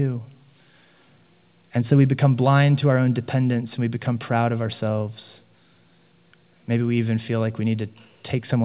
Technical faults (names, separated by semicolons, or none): none